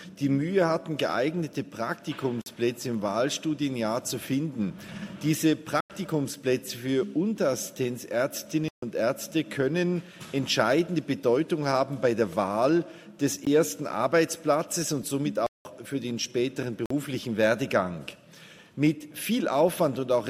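A block of digital silence replaced the signal with zeros at 2.42–2.46, 5.81–5.90, 8.68–8.82, 13.45, 15.46–15.65 and 16.86–16.90 s. Gaps of 46 to 186 ms fit multiples of 2048 samples. The edges are abrupt, so the 16 ms one is a tick and the longer ones are holes.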